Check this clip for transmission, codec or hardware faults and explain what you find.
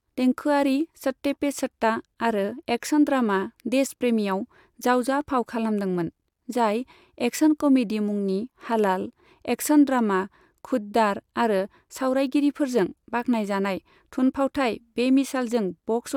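No faults detected.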